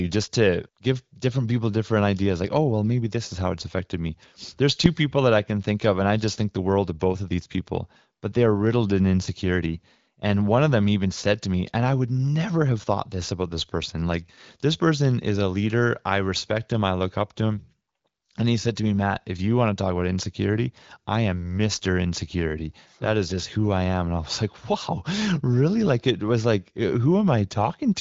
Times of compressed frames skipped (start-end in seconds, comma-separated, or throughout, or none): none